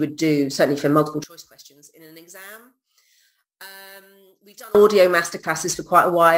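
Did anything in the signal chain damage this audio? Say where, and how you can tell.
Yes. One channel inverted, from 1.24 to 4.75 s: the level falls by about 27 dB and what remains sounds faint. The likely cause is a polarity-reversed lead in the analogue wiring, so summing to mono cancels everything the two channels share.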